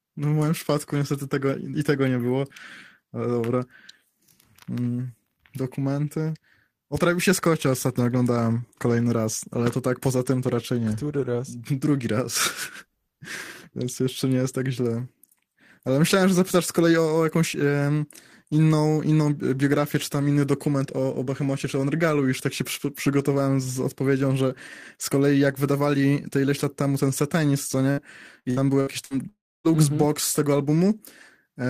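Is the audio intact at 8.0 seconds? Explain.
Yes, at 8.0 seconds the speech plays through intact, with no audible fault at that moment.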